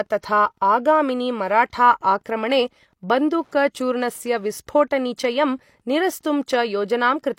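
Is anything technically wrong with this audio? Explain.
Yes. Throughout the speech runs a steady ticking about ten times a second, sitting roughly 45 dB below the voice. This is Wi-Fi interference: a nearby Wi-Fi radio's beacon, repeating every 102.4 ms, is picked up and rectified by the audio circuit.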